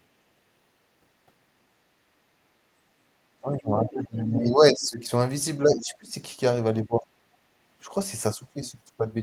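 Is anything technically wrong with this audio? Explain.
Yes, there are two related faults. Speech suppressed in double talk occurs from 3.41 to 5.1 s, 5.62 to 6.15 s and 6.82 to 7.1 s. The echo canceller likely could not tell the talker from loudspeaker echo while both sides spoke, and pulled the level down. The speech dips by about 15 dB, and by about 20 dB in the last stretch.

The other side's voice leaks through from 3.83 to 4.06 s. The canceller likely failed to remove all of the loudspeaker playback picked up by the microphone. A second voice, roughly 10 dB below the main speech, briefly comes through.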